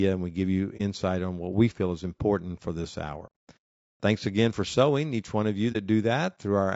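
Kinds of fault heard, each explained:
Low-delay AAC compression: The speech sounds rough and grainy throughout, with a noisy haze filling the gaps between the pitch harmonics and a thin, somewhat artificial top end. The likely cause is AAC-ELD, the low-delay coder of video calls, at a rate that fits about 32 kbps. Its very short frames can't separate closely spaced harmonics well and spend bits quickly, so at this rate the damage is plainly audible.
AAC frame loss with muting: The sound briefly dips or fades to a soft-edged hole three times. The first, at 0.77 to 0.81 s, falls after "and we give you" and before "on what we feel". A longer dropout at 3.26 to 3.34 s follows "is important for this", and a short one at 5.72 to 5.76 s follows "each one of you". Compressed frames went missing and the decoder filled them with silence, with the overlapping windows easing the sound out and back in. 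The roughly 30 ms gaps fit one lost frame, and the 90 ms gap fits three.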